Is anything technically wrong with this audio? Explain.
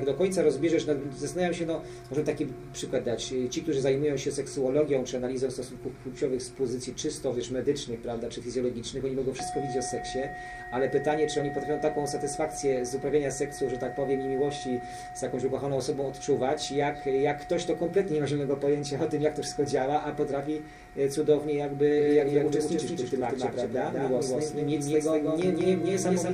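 Yes. From 21.98 s to the end, every sound is followed by a second copy arriving around a fifth of a second later and somewhat quieter, with no reverb tail or room colour on it, and it switches in abruptly rather than fading up. This is a doubled audio track. The likely cause is the same signal being picked up a second time through a slower path, or an edit leaving two copies of the material out of step.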